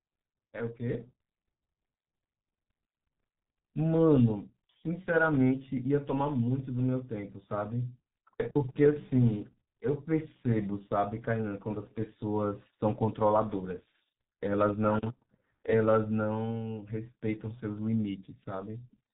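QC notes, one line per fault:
throughout, G.723.1 codec. The speech sounds muffled and hoarse, with smeared consonants. Nothing survives above 4 kHz, and the coarse 30 ms frames update the voice model slowly. The heavy damage fits a low bitrate around 6 kbit/s.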